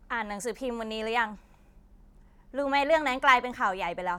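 No technical faults are audible.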